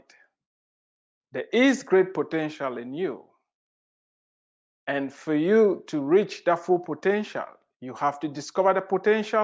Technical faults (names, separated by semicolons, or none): none